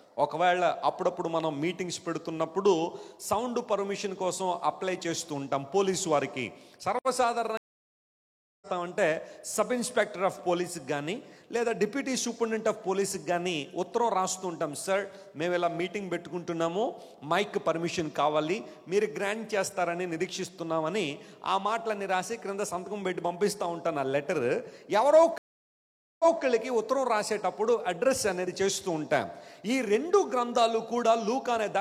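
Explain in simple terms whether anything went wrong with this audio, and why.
The connection dropped twice, causing a stream reconnect each time. At 7.57 s the audio goes silent for about a second and returns roughly 0.7 s further on, skipping some. At 25.38 s it stops for 0.82 s and restarts 0.23 s earlier, repeating a moment.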